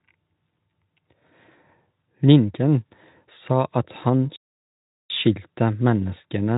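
At 4.36 s, right after "sa at han", the speech cuts out and stays silent until 5.10 s, a gap of 740 ms. This sounds like a playback stall, most likely the player running short of data or its output thread being held up, so nothing reached the output until it caught up. On a waveform it is a flat line across that span. On a spectrogram it is a blank vertical band, with sound resuming abruptly at the right edge.

Near the end, just after "sa at han skyldte", a brief dropout from 6.17 to 6.20 s is patched by VoIP packet loss concealment in the speech codec. One 20 ms frame went missing, and the decoder filled it by carrying its last pitch and spectral shape forward at falling gain. The result is a short, fading smear rather than a hole, with the following sound weak as the decoder recovers. A spectrogram would show the harmonics held flat and dimming for that instant instead of tracking the voice, and the waveform shows a small, repetitive, decaying stretch. 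The Speex coding underneath adds little audible damage, consistent with a mid-to-upper quality setting.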